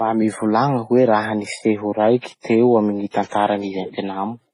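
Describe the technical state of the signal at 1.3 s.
At 1.3 s the speech carries the mixed artefacts of transcoding between lossy codecs, present throughout the clip. The band is dulled and smeared, with swirly, metallic texture layered on top. This likely comes from one low-bitrate encode, such as MP3, re-encoded into HE-AAC.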